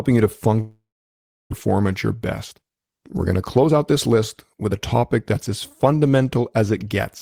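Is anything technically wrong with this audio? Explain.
Yes. From 0.60 to 1.53 s the speech turns to a fading buzz, then near silence, and resumes with about half a second lost, likely a long network dropout.

The speech then runs hurried but unchanged in pitch, at 107% speed from 2.14 to 2.71 s and 111% from 3.25 to 6.38 s. This is a jitter buffer speed-up, trimming tiny pitch-period slices to shed built-up delay.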